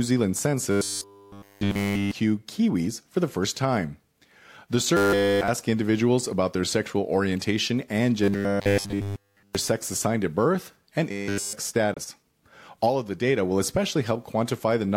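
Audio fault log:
0.71–2.11 s, 4.97–5.48 s, 8.24–9.55 s, 11.11–11.53 s: robotic sound from repeated short buffers. Audio likely arrived too late, so roughly 10 ms chunks looped, replacing the speech with a rigid 100 Hz metallic buzz.
11.93–11.98 s: damaged data in a compressed stream. Corrupted bytes threw the decoder out of frame sync, so about 50 ms of audio comes out as a short chirp, click or hole.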